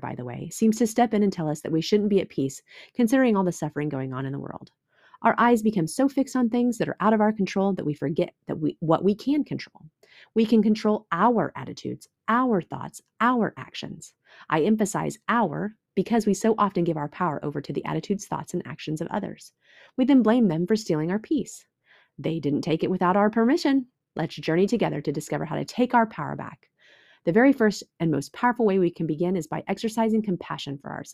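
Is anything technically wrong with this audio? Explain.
No, nothing technically wrong turns up anywhere in this speech recording, so there's nothing here to flag.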